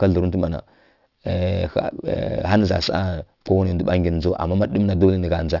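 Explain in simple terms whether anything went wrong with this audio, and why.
Aliasing runs through the whole clip, from start to finish. The audio was moved to a lower sample rate, which fits a drop to about 12 kHz, without first removing the sound above 6 kHz, the highest pitch the new rate can hold. That high sound folded back down into wrong pitches, quieter than the speech itself. S and sh sounds come out gritty and metallic, and the top of the sound seems to run right up to a hard ceiling.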